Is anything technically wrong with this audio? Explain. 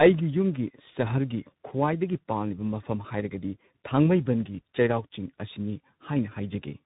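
Yes. Throughout the speech there is tandem speech coding. The call appears to have crossed two separate speech codecs in a row. The chain points to a low-rate iLBC stage at 13.33 kbit/s, then a G.711 mu-law link, then CVSD at 64 kbit/s. At each hand-off the audio was decoded and coded again, so the second coder compounded the first coder's errors. Nothing survives above 3.8 kHz, which makes the speech muffled, and the stacked coding adds roughness and warble.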